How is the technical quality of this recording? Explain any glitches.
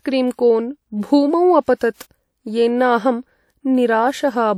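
The recording has one audible fault. Pre-echo at 1.76 to 1.81 s: the transform codec spread quantisation noise across its block, so a short 55 ms hiss precedes a sharp speech attack, which sounds smeared.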